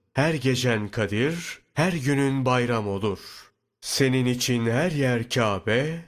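No dropouts, distortion, noise bursts or other technical faults are audible anywhere in the recording.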